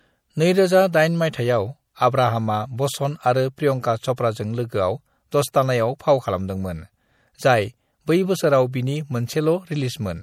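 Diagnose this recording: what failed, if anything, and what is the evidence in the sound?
MP3 compression, audible throughout the speech: sibilants take on a swirly, watery quality. At the codec stage, the likely cause is an encoder short of bits, zeroing weak frequency lines frame by frame, which fits roughly 64 kbps.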